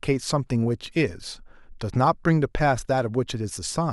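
No technical faults can be heard anywhere in this speech recording. Nothing interrupts or disturbs the audio at any point.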